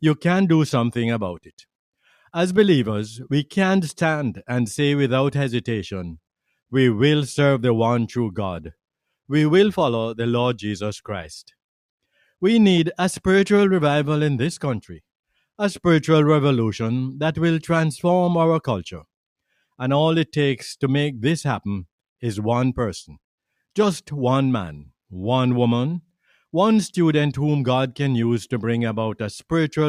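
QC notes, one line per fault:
1.38–1.64 s, sound cut by the noise suppressor: the suppressor mistook part of the sound for noise and pulled it down by about 17 dB at its deepest, so roughly 150 ms within this span sinks in level.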